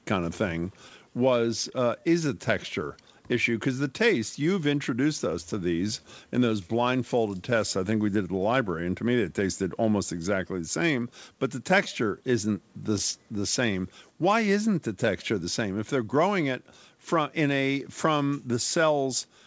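The whole clip has clock drift between sender and receiver: the sender's clock runs slow, by roughly one and a half percent, so the receiver's jitter buffer keeps draining and has to stretch the audio to keep going. Through the G.722 call path, with nothing above 8 kHz, that's heard as faintly uneven pacing rather than anything dramatic.

From 0.20 s to 18.52 s you get the repeated timing corrections that result: the receiver keeps repeating tiny slices, running the speech at about 99% speed and adding around a fifth of a second overall. The spacing is irregular, so it comes across as small hiccups and a slightly wobbly tempo.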